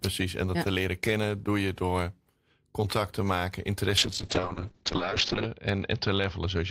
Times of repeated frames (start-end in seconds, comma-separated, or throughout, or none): none